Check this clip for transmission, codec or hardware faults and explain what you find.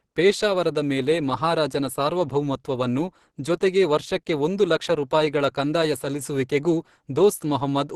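One codec fault runs through the whole clip. Opus compression, throughout: the sound points to Opus's hybrid speech mode, which likely coded the low band as modelled speech and the upper band coarsely, leaving nothing above 12.1 kHz. The speech sounds clearly muffled and hoarse, which fits a bitrate of around 16 kbps.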